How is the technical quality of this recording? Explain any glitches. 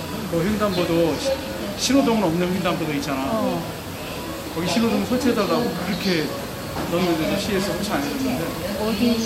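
No glitches or technical faults can be heard anywhere in the recording.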